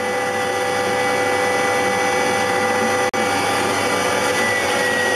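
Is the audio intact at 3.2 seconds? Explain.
Yes, but only just. A brief hole opens at 3.09 s and the sound resumes at 3.18 s, so by 3.2 s the audio is back. That gap is a digital broadcast dropout: the sound cuts to silence for about 43 ms and then returns. The receiver muted because it lost the signal or a frame failed its checksum, and it stayed silent until good frames arrived. A gap of that length fits a single lost frame. What was sent during it is gone.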